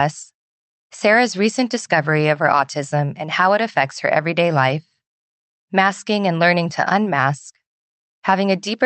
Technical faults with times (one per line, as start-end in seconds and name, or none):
none